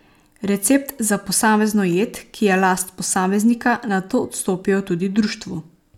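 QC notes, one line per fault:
No faults turn up anywhere in the speech. Nothing here needs a QC note.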